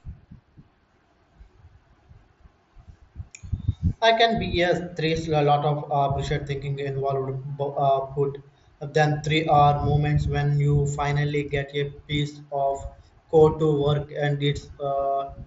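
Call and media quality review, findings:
No audible faults found in this speech clip.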